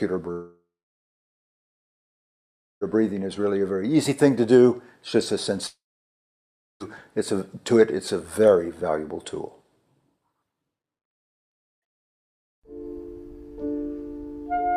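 From 0.31 to 2.92 s and again from 5.67 to 6.82 s the sound breaks off, decays briefly as a fading buzz, then sits near-silent for about 2.1 s and 1.0 s before resuming without the lost material, a pattern that fits a long network dropout, likely from a stalled stream.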